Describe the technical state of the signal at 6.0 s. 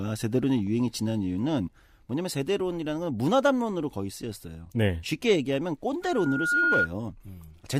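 Loudspeaker feedback squeal, 6.02 to 6.89 s: the microphone re-amplifies its own loudspeaker, so a 1.4 kHz tone swells over roughly half a second to about 5 dB above the speech.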